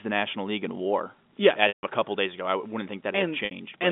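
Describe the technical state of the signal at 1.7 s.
At 1.7 s the signal is inside a packet loss with pitch repetition, running from 1.68 to 1.83 s. About 150 ms of audio went missing, a gap that fits five 30 ms packets. The receiver filled it by looping the last pitch period, giving a brief held buzz that fades to silence before "a couple days ago" returns through a short cross-fade. On a waveform, identical repeating cycles shrink to a flat line; a spectrogram shows frozen, evenly spaced harmonics, inside the narrow telephone band, dying into an empty column.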